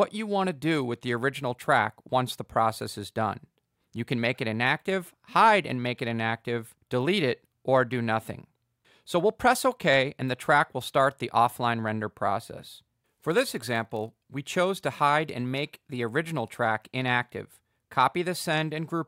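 From 13.29 to 14.2 s there's a block size mismatch (padded): one stage hands over blocks a touch shorter than the next reads, so each gets zero-filled. That tiny gap repeats as a 43.1 Hz buzz, which fits a 1024-sample read, with pitch essentially unchanged.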